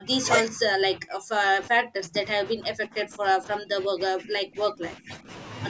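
From the start to 0.26 s, then from 0.51 to 5.3 s, the speech dips hard, by about 30 dB and then about 35 dB, for roughly three seconds in all. That's likely speech suppressed in double talk: the echo canceller mistook the overlapping voices for echo.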